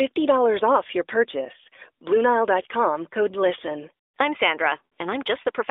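At 4.86 to 4.90 s, lost AMR speech frames: radio errors corrupted a short run of frames, likely three of 20 ms, so the narrowband decoder stretched its last good pitch and vocal tract settings with falling gain, briefly smearing and fading the speech before recovering.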